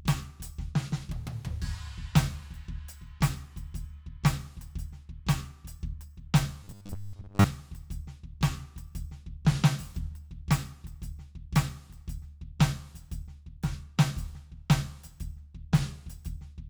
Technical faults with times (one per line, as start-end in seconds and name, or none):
6.64-7.45 robotic sound from repeated short buffers